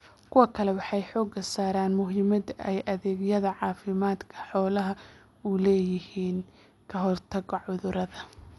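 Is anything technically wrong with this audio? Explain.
Yes. Throughout the speech the sound is dull, with nothing above 11.5 kHz and plainly audible rough, fluttering noise around tones. The likely cause is Dolby Digital compression at a low rate, fitting about 64 kbps: the encoder narrows the band and leaves many frequency lines unfunded, so the decoder fills them with noise.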